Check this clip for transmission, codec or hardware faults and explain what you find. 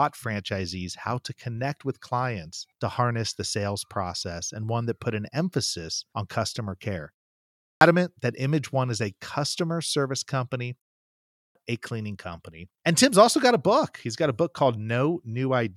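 There is a clipped start after a pause, twice. At 7.47 s, after "emphasis on customer care", and at 11.2 s, after "a customer service company", speech bursts out of silence missing its opening, roughly 0.34 s and 0.35 s lost. The output device idles through each brief pause and wakes too slowly.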